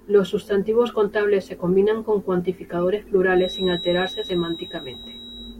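A feedback whistle enters at 3.31 s, just after "se combinan con cuantificadores", and lasts to 5.60 s. A thin, steady 3.8 kHz tone sits well beneath the speech, swelling and fading slowly in level, likely from a loudspeaker-to-microphone loop held right at the edge of feedback.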